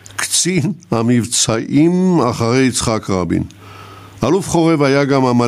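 Gain pumping runs through the whole speech clip: the level is pulled down by about 20 dB under each loud syllable, likely from excessive gain feeding a fast limiter. The waveform looks flattened, with loud and soft parts squeezed closer in level.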